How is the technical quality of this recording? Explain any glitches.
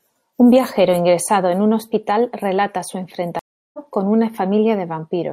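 There is one glitch in this speech recording. A stream reconnect at 3.39–3.79 s leaves about 0.35 s of silence. The link dropped and a fresh decoder restarted, so the speech resumes about 0.4 s further on. Unlike a plain dropout, the audio skips ahead rather than simply pausing.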